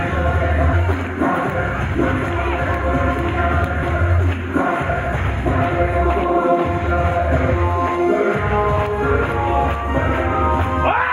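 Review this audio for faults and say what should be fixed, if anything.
Jumps at 0.71, 1.93, 3.82 and 7.51 s mark compressed frames skipped: each time the sound jumps ahead by around a sixth to a third of a second, which points to whole frames missing or rejected as damaged. Checking file integrity and transport checksums, so damaged frames are caught and resent before decoding, would prevent it.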